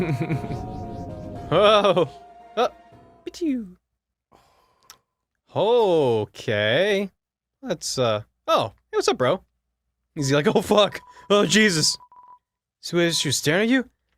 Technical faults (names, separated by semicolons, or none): none